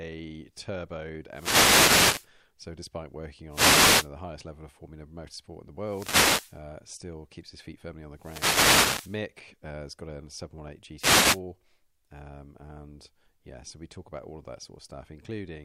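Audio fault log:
1.31–2.30 s, 3.49–4.10 s, 5.81–6.61 s, 8.14–9.24 s, 10.97–11.41 s: wireless microphone noise hits. The FM radio link fades as reflected signal paths cancel, letting receiver noise rise, so each lasts between about 0.4 and 1.1 s as a swish of static over the speech.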